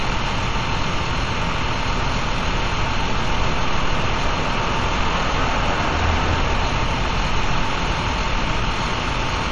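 A recording of everyday sound with frames out of order at 6.43–6.48 s and 8.08–8.13 s. Each time, two adjacent 23.2 ms blocks play swapped, causing a brief flutter.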